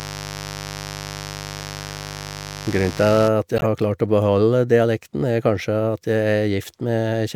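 From the start to 3.29 s the speech sits on a mains buzz, a steady, raspy tone built on 50 Hz and roughly 15 dB below the speech. The rasp comes from sharp switching spikes, from a dimmer, a rectifier or a missing shield, entering the signal twice per mains cycle. Those spikes spread energy across a long series of 50 Hz harmonics into the kilohertz range, which gives the hum its buzzy edge. The buzz stops at 3.29 s.

From 3.57 to 3.66 s, about 96 ms, there is a short burst of chirping noise from a corrupt frame being decoded. Flipped bits in a few consecutive compressed frames were not caught, so the decoder played them anyway. Misread gains and codes put energy at the wrong frequencies for the length of the damaged frames. This produces an abrupt, unnatural blip that peaks around −10 dBFS, well above where it belongs.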